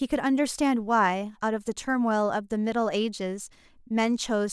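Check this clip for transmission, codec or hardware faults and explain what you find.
Listening through the recording, I find no faults to report. There is nothing in this speech that calls for explanation.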